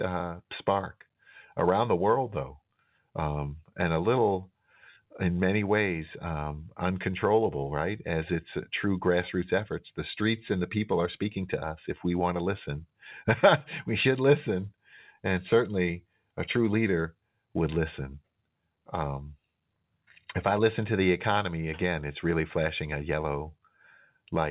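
Nothing goes wrong anywhere here: the speech just sits in the usual narrow phone band with nothing above 4 kHz, which fits a normal G.711 mu-law call at 64 kbps doing its job.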